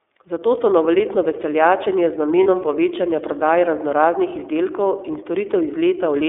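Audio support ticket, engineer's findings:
Narrowband, slightly rough and synthetic speech across the whole clip. The iLBC codec is the cause. Band limited to roughly 300 Hz to 3.5 kHz, nothing above. The grain fits iLBC's 13.33 kbps mode with 30 ms frames, each coded independently. Damage plainly audible.

Lost iLBC frames at 2.43 to 2.46 s, between "se novoletno veseljačenje z" and "povečanja prodaje". Brief held, buzzy vowel-like fill. The decoder repeated the last pitch cycle with added noise to cover the gap. Duration points to a single lost 30 ms frame. Speech recovers immediately after, since iLBC frames stand alone.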